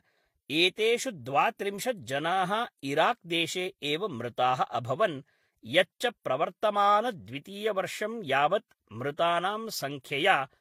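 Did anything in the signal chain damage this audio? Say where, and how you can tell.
Yes. At the codec stage, transcoding between lossy codecs, likely HE-AAC then Vorbis, leaves both codecs' artefacts audible together throughout.

At the buffer stage, a block size mismatch discards the end of each block, producing a steady 43.1 Hz buzz throughout, which fits 1024-sample blocks being cut short.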